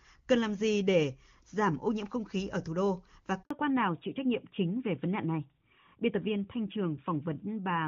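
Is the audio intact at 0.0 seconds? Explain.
Yes, the audio is intact at 0.0 seconds, with no fault at that moment.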